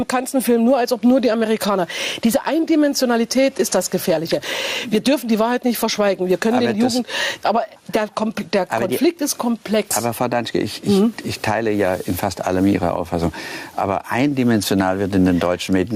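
Gain pumping runs through the audio: the gain swings around 10 dB, pulled down under each loud sound, likely from excessive input gain driving a fast limiter.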